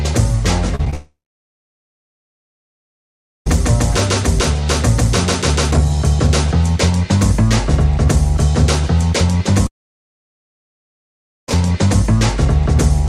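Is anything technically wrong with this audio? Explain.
Yes. From 0.75 to 0.94 s there is repeated packet loss (robotic sound). Four short gaps, the longest 34 ms, are each patched by extending the preceding sound, so about 35% of that span is concealed. The audio turns choppy. On a waveform the stretch shows brief repeated or smeared segments, and a spectrogram shows short blocks of frozen, smeared harmonics alternating with normal texture.

Two long network dropouts follow. The first runs from 0.94 to 3.48 s and the second from 9.67 to 11.58 s. In each, the sound from just before the gap is carried on briefly and fades. That leaves about 2.3 s of silence in the first and about 1.8 s in the second. Audio resumes afterwards with that material missing, which points to a likely loss of incoming audio on the network path. Both appear as flat near-empty stretches in the waveform and dark bands on the spectrogram.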